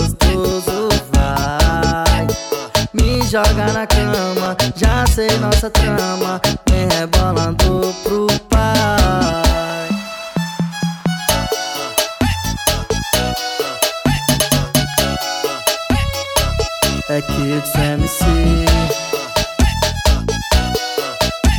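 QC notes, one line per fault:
0.52–21.49 s, clock drift buffer slips: a click recurs every 1.31 s, about fifteen times across this span, likely because two devices' clocks disagree by a few hundred ppm. The buffer between them slowly drifts until a tiny block of roughly fifteen samples is dropped or repeated. Each slip breaks waveform continuity as a brief step or glitch. A spectrogram shows evenly spaced thin vertical broadband lines.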